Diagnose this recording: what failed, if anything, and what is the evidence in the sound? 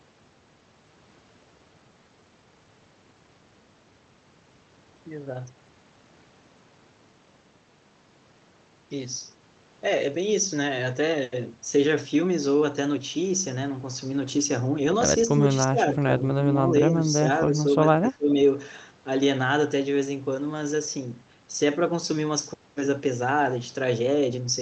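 Speech suppressed in double talk, at the call-processing stage: speech dips about 5 dB at 15.38–15.45 s and 17.48–17.73 s, and about 20 dB at 15.65–16.05 s and 18.01–18.35 s, likely the echo canceller turning it down during double talk.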